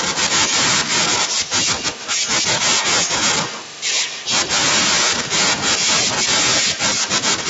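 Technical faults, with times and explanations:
0.13–4.53 s, echo leak: a second copy of the speech trails the original by 146 ms, sitting roughly 10 dB below it, so the voice is heard doubled. The likely cause is a far end playing the call through a loudspeaker whose echo canceller failed to subtract what its microphone picked up, returning that residue down the line.
4.92–7.49 s, echo leak: the same 146 ms delayed copy returns at a similar level after a brief clean gap, again likely from incomplete cancellation of the far-end loudspeaker signal.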